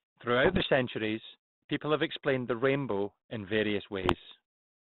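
Bit errors on the ADPCM link at 0.44 to 0.67 s and 4.02 to 4.32 s derail the decoder's predictor, producing pops, rough bursts and level jumps.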